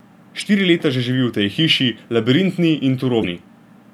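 A speech clip with two brief bursts of damaged data in the compressed stream, at 0.40 s and from 3.20 to 3.24 s, where corrupted frames throw the decoder off sync before it recovers.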